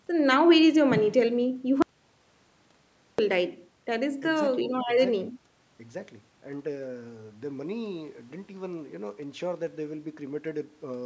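At 1.82 s the speech cuts off abruptly and stays gone until 3.19 s, an audio dropout to silence lasting about 1.36 s. The gap holds silence with no room tone, so whatever was said there is lost. The likely cause is the input dropping out while the recorder kept writing silence. On a waveform it shows as a flat line; on a spectrogram, a fully blank band, against speech energy otherwise ending near 8 kHz from the call's microphone processing.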